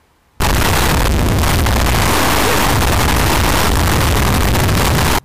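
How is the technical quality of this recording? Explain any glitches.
Poor. From 0.40 s to 5.19 s the audio becomes loud, harsh distortion with soft passages as loud as strong ones, likely from signed and unsigned 8-bit samples being mixed up, flipping the top bit so every zero crossing jumps across the full range.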